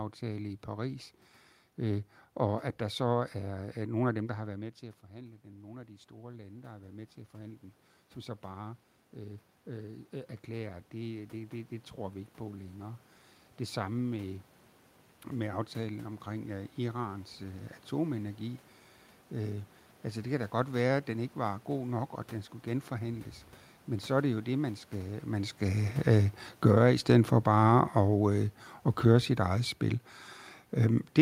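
A speech recording with automatic gain rising from 3.45 s to 17.74 s. The talker moves away around 4 s, the level drops by about 15 dB, and the control slowly climbs about 15 dB to compensate, so the voice and the room noise swell together over those fourteen seconds. After the talker moves again near 25 s, automatic gain falling begins at 26.02 s and continues to the end. The sound starts loud and sinks along with its background, interrupted by a brief rise of about 4 dB from 26.79 s to 27.94 s.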